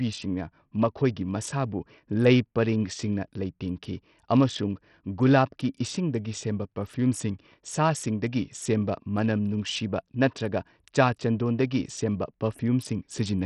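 Bluetooth SBC compression runs through the whole speech clip, from start to finish. The treble is missing above about 13.3 kHz, and what remains up top flickers in and out. A gritty, grainy noise rides on the sound. Heavy damage like this points to a low bitrate near 64 kbps. The likely cause is a Bluetooth link, where SBC's simple allocation starves the upper sub-bands of bits and quantises the rest coarsely, leaving aliasing behind.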